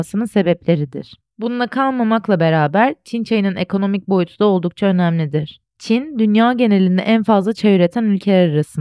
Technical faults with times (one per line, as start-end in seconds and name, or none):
none